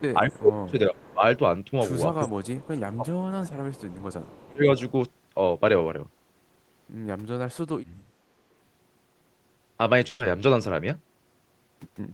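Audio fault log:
0.14–1.23 s, 2.25–3.74 s, 4.47–4.64 s: speech suppressed in double talk. Both ends were likely talking at once, and the echo canceller, unable to tell the near talker from the loudspeaker echo, clamped down on everything. The talker's level dips in pieces across these spans, by about 25 dB at the deepest in the first and third and about 20 dB in the second, so the voice thins and partly drops out.
0.32–0.36 s, 0.97–1.13 s, 2.6–2.68 s, 3.76–4.47 s, 4.79–4.9 s: echo leak. The far side's echo canceller likely failed to strip all of its loudspeaker pickup, so a copy of the voice returns 414 ms late. It sits about 25 to 35 dB under the direct speech, heard as faint scraps, with the longest stretch running from 3.76 to 4.47 s.
10.07–10.21 s: burst of packet loss. About 120 ms of audio never arrived in time to be played. The receiver filled the gap by carrying the last sound forward and fading it, so a brief held, decaying tone or hiss stands in for the real signal. 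Playback then picks up further along with that stretch gone.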